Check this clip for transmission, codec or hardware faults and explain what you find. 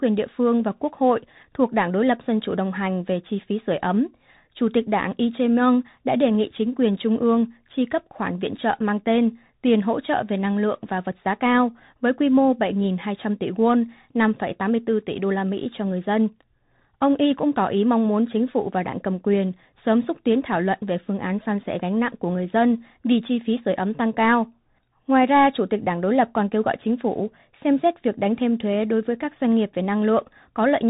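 The whole clip has been through a Bluetooth CVSD headset codec, and the damage is plainly audible from start to finish. Nothing in the speech reaches above about 3.8 kHz, so it has that boxed-in, phone-line quality. CVSD sends just one bit per sample to nudge the signal up or down with an adaptive step size, and that's consistent with a 64 kbps link. Loud, fast-rising parts outrun the step and distort, s sounds come out scratchy, and a grainy hiss sits underneath.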